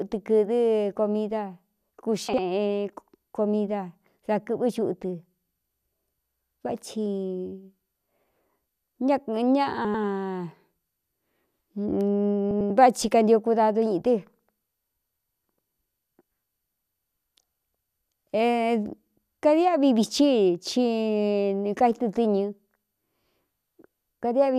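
Frames out of order in this speech clip at 2.29–2.38, 9.85–10.04, 12.51–12.70 (just before "kanio kudadu") and 17.16–17.31 s: two adjacent blocks, 48, 96, 96 and 72 ms long, play swapped, giving a garbled flutter. No time is lost.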